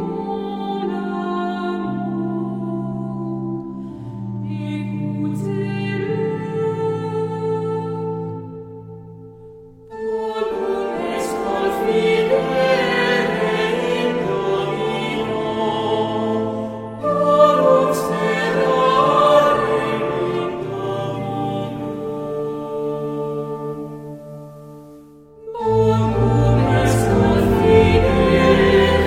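At 20.48 s, digital radio blending to analogue: the digital signal drops, a 392 ms crossfade onto FM brings faint hiss, about 2 dB quieter, and it returns to digital at 25.34 s.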